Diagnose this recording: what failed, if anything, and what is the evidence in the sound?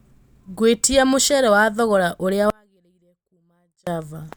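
Audio dropout to a faint residue, 2.50 to 3.87 s: speech cuts abruptly to a faint residue around 40 dB down, likely an intermittent analogue connection.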